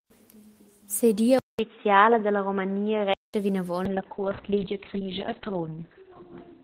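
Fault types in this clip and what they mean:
Input switched to a poorer device: At 1.39 s the sound drops out for 200 ms, then returns dull and boxy. Nothing is heard above 3.8 kHz, and a faint new noise floor sits about 40 dB down. Level barely changes. The cause is likely another microphone or headset profile, lasting until 3.34 s.
Call bitrate drop: From 3.86 s to the end, the encoder's rate falls from 32 kbps to 6 kbps. Coding turns coarse and watery. Bandwidth shrinks from 20 kHz to 4 kHz, so the speech sounds muffled. The lowest rate holds for 2.36 s.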